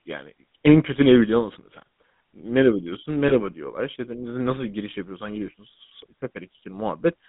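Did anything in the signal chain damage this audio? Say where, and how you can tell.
Yes. At the codec stage, the whole clip has the buzzy, gravelly texture of the GSM full-rate codec. The speech sits in a band from about 150 Hz to 3.7 kHz, and the roughness is plainly audible. The cause is the codec rebuilding the voice from a vocal-tract model driven by a coarse, regularly spaced pulse excitation, which fits the 13 kbps full-rate codec. A plain telephone band filter would sound just as narrow but smooth, without this grit.

Lost GSM frames, a network-stage fault, appear twice: from 3.28 to 3.32 s and from 5.46 to 5.49 s. At each point the sound briefly freezes into a rough, metallic ring instead of continuing naturally. Each gap matches the loss of a single 20 ms frame. The decoder covers the gap by repeating the last good frame's settings. A simple dropout would leave silence or a click instead of this held tone.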